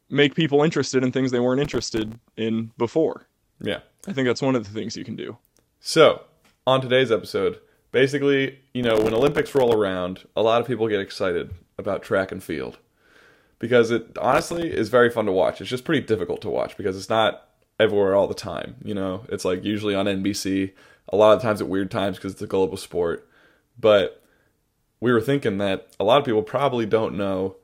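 Processor overload crackle occurs three times. The processor falls behind and misses dozens of deadlines again and again over a short stretch, on buffers of only a few milliseconds each. Every missed buffer drops to silence with hard edges, so gritty, tearing crackle rides on the speech. It runs from 1.65 to 2.15 s after "in things they weren't", from 8.84 to 9.74 s after "today's episode basically you", and from 14.32 to 14.63 s after "because it", and clears once the load passes.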